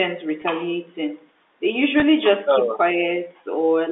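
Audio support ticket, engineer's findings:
Packet loss with pitch repetition at 0.42–0.44 s and 2.00–2.02 s: brief held, buzzy tone as the receiver repeats the last pitch period across about 20 ms, consistent with a single lost packet each time, over G.711 telephone coding.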